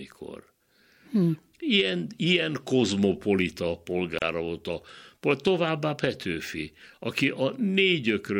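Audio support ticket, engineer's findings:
Short dropout in continuous speech, 4.19–4.22 s: sound cuts to silence for about 35 ms with smeared edges, then resumes where it left off. Gap at a join of encoded pieces. Source was encoded in separate chunks, one join every 10 s, concatenated without trimming. Encoder start-up delay and last-frame padding left in at the splice. Fix: gapless join or trim the priming and padding per segment.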